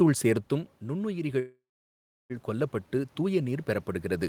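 A speech recording with two system faults. Automatic gain rising: after the talker moves back from the microphone around 0.5 s and the level falls by about 11 dB, the gain control slowly adds about 7 dB between 0.48 and 3.96 s, so voice and room noise swell together. A call audio freeze follows, likely from packets held up in transit draining the jitter buffer. From 1.39 to 2.32 s the receiver carries the last sound on as a fading buzz or hiss, then goes quiet for roughly 0.7 s before resuming where it stopped. This inserts a 0.9 s gap while losing nothing.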